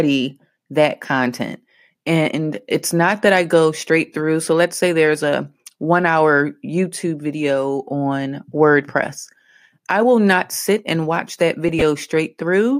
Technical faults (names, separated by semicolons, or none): corrupt frame decoded